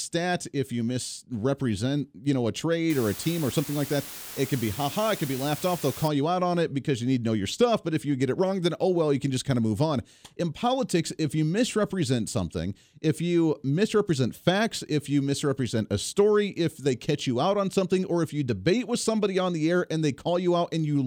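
From 2.90 to 6.08 s, low bit depth with dither: dithered rounding to 6 bits leaves a steady, even hiss roughly 15 dB below the voice, with no distortion. A spectrogram shows a flat floor across all frequencies; the waveform's pauses fill with fuzz.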